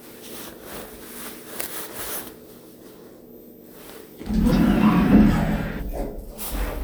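At 4.48 s the everyday sound suddenly lurches forward, and it does it again at 5.78 s. Both are compressed frames skipped: whole blocks of the encoded stream never got played, so the audio jumps ahead, by something like 0.7 s the first time and about half a second the second. The gaps fit frames of about 46 ms.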